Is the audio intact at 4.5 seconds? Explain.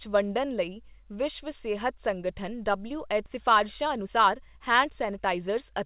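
No. From 3.30 to 5.82 s a jitter buffer speed-up removes pitch-period slices, about 0.4 s in total, so speech runs 115% fast and hurried, yet keeps its pitch, unlike resampling.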